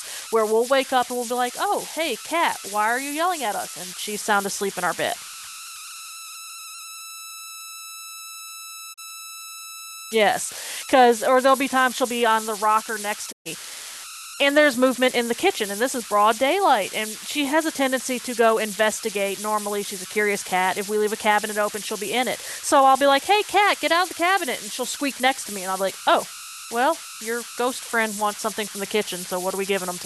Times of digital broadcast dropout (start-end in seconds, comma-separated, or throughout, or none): 8.92-8.99, 13.31-13.47